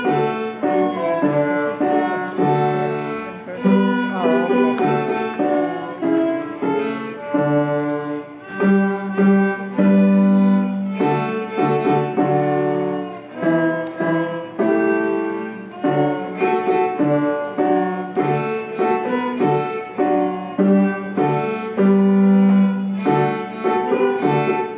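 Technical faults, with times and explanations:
Nothing here stands out as a technical fault; every part of the recording comes across as it should.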